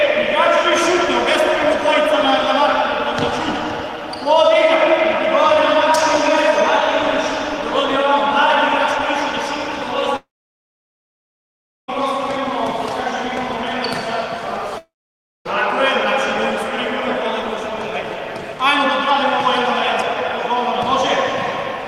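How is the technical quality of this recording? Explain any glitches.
The recording has two clear interruptions. From 10.16 to 11.90 s and from 14.78 to 15.47 s, the sound smears into a brief fading buzz for about a tenth of a second and then goes silent, for roughly 1.6 s and 0.6 s respectively. When it resumes, that stretch is missing. This is likely a long network dropout: packets stopped arriving, the receiver stretched the last sound briefly, then gave up. On a spectrogram, each appears as a blurred tail followed by an empty blank band. On the waveform, each is a flat line.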